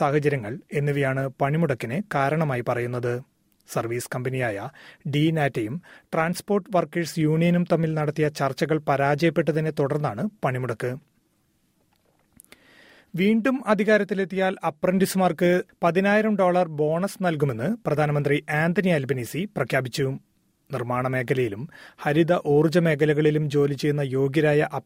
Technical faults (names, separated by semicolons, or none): none